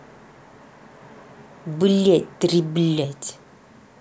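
No technical faults can be heard in this recording.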